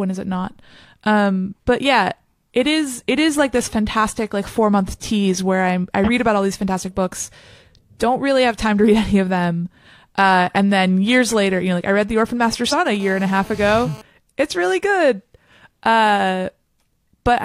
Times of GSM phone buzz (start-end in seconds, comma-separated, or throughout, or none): 13.00-14.02